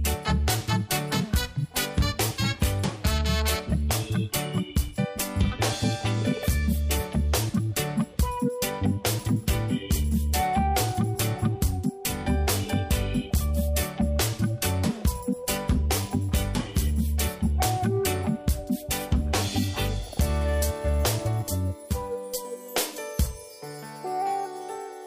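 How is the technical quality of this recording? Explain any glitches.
One glitch stands out. From 21.42 to 22.45 s, channel delay causes comb filtering. One channel lags around 10 ms, cancelling near 50 Hz and upward. The sound turns hollow and phasey.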